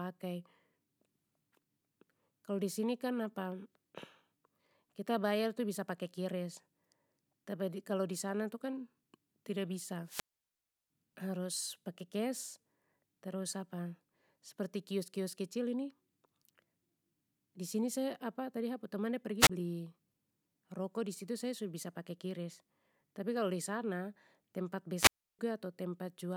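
Wireless microphone squelch dropouts occur at 10.04–10.90 s, muting about 0.70 s before "harus pake kes"; at 19.39–19.50 s, a 28 ms mute; and at 24.96–25.39 s, after "tapi kalo disana tempat", muting 0.32 s. Each time the radio signal fades, a brief burst of hiss rises, and the receiver's squelch cuts the output. On a spectrogram, each dropout looks like a wash of broadband noise followed by a blank vertical gap. The waveform shows that gap as a flat line.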